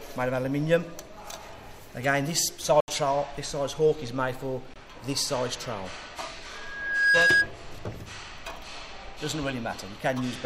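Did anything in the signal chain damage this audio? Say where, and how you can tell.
Yes. Blocks of digital silence at 2.80 to 2.88 s (76 ms) and 4.74 to 4.76 s (21 ms) come from the driver or buffer stage. The audio drops abruptly to zero and returns with no fade. The shorter gap fits a 1024-sample buffer left unfilled at 48 kHz.

A loudspeaker feedback squeal at 6.53 to 7.50 s points to an acoustic loop between the playback speaker and the microphone. A steady 1.6 kHz tone builds over about half a second to roughly 10 dB above the sound, because the loop gain exceeds one at that frequency.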